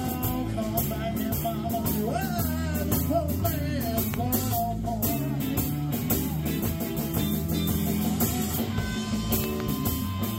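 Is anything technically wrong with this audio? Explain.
Yes, there are two loud pop events. From 4.14 to 4.16 s a single sharp pop jumps out, and from 9.44 to 9.62 s two pops arrive in quick succession. Each peaks about 15 dB above the surrounding audio, while the sound continues underneath. The likely cause is a sudden voltage step or pulse, from a plug, a switch, static or a driver glitch, entering the signal chain. The later circuitry shapes that pulse into a brief, forceful click.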